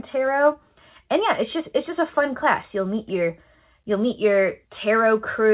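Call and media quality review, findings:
Nothing stood out on listening to the speech, which has the narrowband character of a G.711 mu-law call path with no content above 4 kHz.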